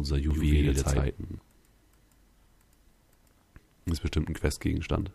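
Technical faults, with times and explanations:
0.31 to 1.39 s, doubled audio track: a second full-band copy of the sound sits roughly a tenth of a second behind the first and at much the same loudness, then both the copy's entry and its exit are abrupt. The likely cause is the same signal reaching the mix twice, once through a slower path. Unlike an echo or reverb, there is exactly one repeat, with no decay tail and no room colour.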